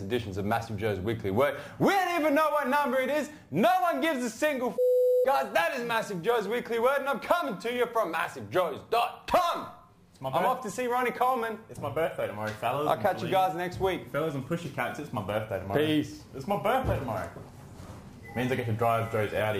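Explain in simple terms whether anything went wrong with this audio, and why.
Something went wrong from start to finish. Crude rate conversion copied or skipped samples without smoothing. That adds a gritty fizz to loud, bright sounds.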